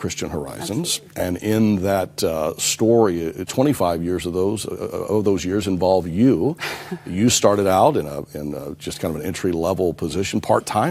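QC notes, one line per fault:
No faults heard on this pass; nothing to log.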